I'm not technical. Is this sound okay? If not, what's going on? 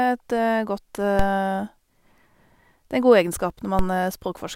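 No. Twice, at about 1.19 s and again at 3.79 s, there's a brief low thump underneath the speech, a bit like a knock on the microphone, while the talking itself carries on unchanged. This is a DC step: the recording's resting level suddenly jumps, and that sharp shift is what you hear as the thump. Each time, the shift then eases away on its own within a fraction of a second.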